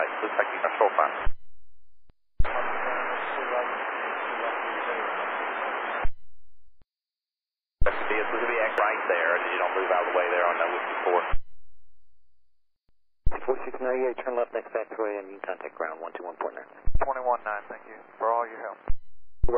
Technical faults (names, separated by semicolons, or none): damaged data in a compressed stream